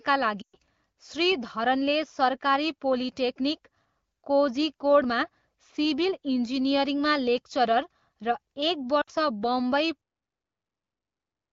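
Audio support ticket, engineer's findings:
0.42–0.56 s: speech smears, drops to near silence within two frames, returns thin and rough. Lost AMR speech frames. Decoder repeating last good pitch and vocal tract parameters with falling gain. Fits about six 20 ms frames failing checksum.

9.01–9.10 s: shorter drop to near silence, brief rough recovery. Same cause, about three frames concealed. Wideband concealment decays fast; speech band above 6.4 kHz stays noise-filled, consistent with a higher AMR-WB mode.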